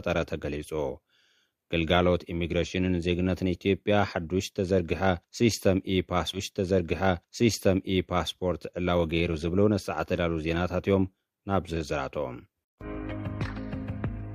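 A two-second stretch of the audio plays twice: at 6.33 s there is a small blip as playback jumps back, and the same material runs again through to 8.33 s, adding 2 seconds to the running time. This is a stream segment repeated fault. The player fetched or queued one two-second chunk of the stream a second time, so the listener hears that section again before playback moves on.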